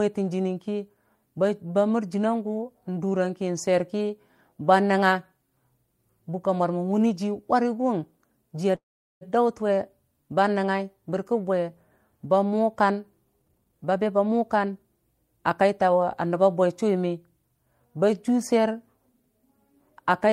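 A call audio freeze runs from 8.75 to 9.23 s. The last sound is stretched into a brief fading buzz, then 0.4 s of silence, and the speech resumes exactly where it stopped with nothing lost. Packets were likely held up until the jitter buffer emptied.

A jitter buffer speed-up follows from 13.39 to 14.85 s. The speech runs at 132% of its normal rate at unchanged pitch and sounds hurried. To shrink an overfull buffer, the receiver cut many short pitch-period slices, totalling about half a second.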